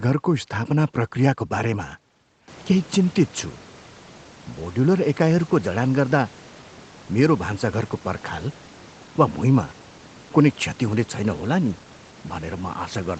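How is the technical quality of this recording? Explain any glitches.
There are no glitches in this speech recording: the high frequencies stop at 8 kHz, as expected from a call codec's bandwidth, and the room background rises by about 18 dB at around 2.5 s but stays about 26 dB below the speech.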